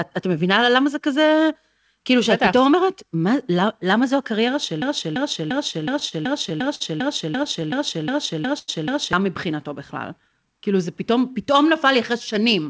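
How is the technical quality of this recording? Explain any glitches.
The recording has three kinds of glitch, all packed between 4.82 and 10.59 s of the speech, heard over a call path whose sound stops at 8 kHz, which fits a wideband G.722 link at around 64 kbps.

Broken-record loop, 4.82 to 9.13 s. A fragment of about 0.34 s repeats exactly, back to back, twelve times. The likely cause is a stall in the player, encoder or stream, which kept replaying the last piece it held instead of fresh audio. Whatever should have been heard in those four-plus seconds is gone, replaced by the same chunk cycling.

Repeated stalls (stutter), 5.44 to 6.82 s and 7.44 to 8.70 s. Packets arrived late, so the jitter buffer kept running dry and the receiver stretched the last sound to cover each gap. The first stretch has nine gaps totalling 146 ms, the longest 52 ms. The second has five gaps totalling 124 ms, the longest 91 ms. 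Nothing is missing, but the looping audio catches and drags in small hitches.

Jitter buffer slow-down, 9.98 to 10.59 s. The buffer was building up a reserve, so the receiver repeated single pitch periods and bits of pauses, adding 65 ms. Playback runs at about 90% speed with the pitch unchanged, making sounds drawn out.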